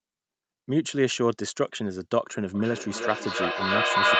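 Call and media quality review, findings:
Feedback echo between two devices, 2.55 s to end of clip. Speech recurs roughly every 300 ms, thinner and ringing, with repeats building to about 6 dB over the direct speech instead of decaying. A second in-room device replays the call, and the local echo canceller cannot remove it.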